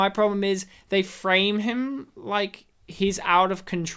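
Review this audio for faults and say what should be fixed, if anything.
Nothing in this speech recording needs fixing, as no faults can be heard anywhere in it. It can be left as it is.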